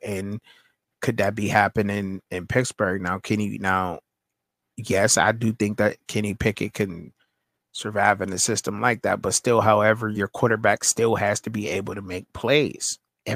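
No technical faults can be heard anywhere in the recording, and the signal stays steady throughout.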